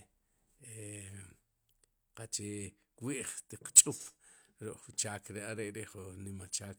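No dropouts, clicks, distortion, level jumps or other transport or processing faults can be heard anywhere in the recording.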